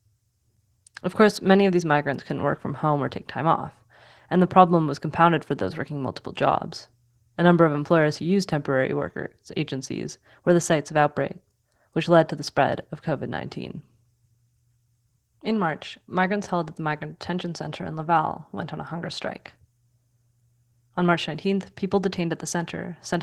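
Throughout, Opus voice compression in hybrid mode is starved of bits, consistent with about 16 kbps, so the speech sounds hoarse and slightly robotic.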